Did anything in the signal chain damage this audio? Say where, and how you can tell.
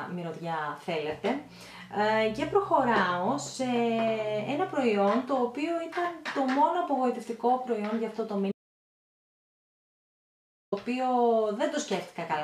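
Yes, there's an audio dropout to silence from 8.52 to 10.72 s. The sound stops mid-flow and about 2.2 s of silence follows, with no room tone at all, then it cuts straight back in. The likely cause is a lost input connection upstream while the recorder kept writing zeros.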